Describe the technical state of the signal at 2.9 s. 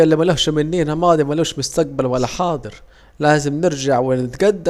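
At 2.9 s the speech signal is intact, with no audible technical fault at that moment.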